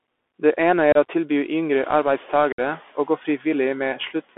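A speech recording carried over a Bluetooth CVSD headset codec, which confines everything to a narrow band of roughly 250 Hz to 3.5 kHz, consistent with a 64 kbps CVSD link. A spectrogram shows a hard ceiling with nothing above it. The one-bit slope tracking leaves granular hiss under the voice and audible roughness on sibilants and loud peaks. Unconcealed Bluetooth headset packet loss cuts two abrupt holes. The first, from 0.92 to 0.97 s, drops about 30 ms, a few packets' worth. The second, from 2.52 to 2.60 s, drops about 60 ms, several packets. On a waveform each gap appears as a sharp-edged flat stretch, with the speech returning briefly quieter as the codec's step size rebuilds. Separately, the room's background noise rises by about 15 dB around 1.5 s and then sits about 24 dB below the speech.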